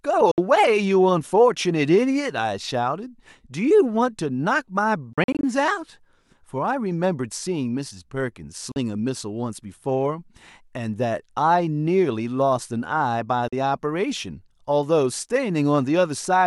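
Four short holes drop out of the speech, at 0.31–0.38 s (about 64 ms gone), 8.72–8.76 s and 13.48–13.53 s (roughly 43 ms each), plus a messier patch at 5.13–5.43 s where about 150 ms goes missing in bits scattered across 300 ms, the longest single gap near 43 ms. The audio cuts to silence and picks up later as if it kept playing. That's likely a Bluetooth dropout, with packets not reaching the headphones in time.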